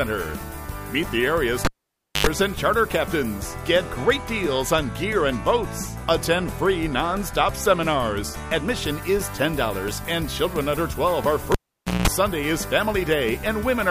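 A pop at 1.65 s drops the sound to near silence for about 0.57 s, then a 90 ms burst of 50 Hz hum and a second pop restore it by 2.27 s. The same pattern returns from 11.52 to 12.08 s: about 0.51 s of near silence, then 183 ms of 60 Hz buzz. Both are a cable pulled and plugged in while live. The contacts break and remake with a click each time, and the hum comes from the plug tip touching the socket before the ground connects.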